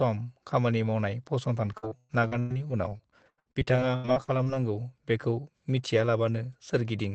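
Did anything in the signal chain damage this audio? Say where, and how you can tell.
Yes. After "खामानि मावनाय", from 1.63 to 4.48 s, the sound turns choppy and robotic, with gaps up to 118 ms: repeated packet loss on the network, each hole patched by extending earlier sound.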